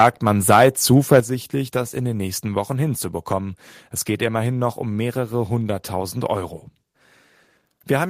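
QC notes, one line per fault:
1.11–1.19 s, microphone overload. Peaks are flattened, giving a harsh crackle. The input likely ran about 4 dB too hot, clipping roughly one sample in twenty.
1.2 s, microphone volume stepped down. Speech and background drop abruptly by about 8 dB, likely because software cut the input level in one step after that peak.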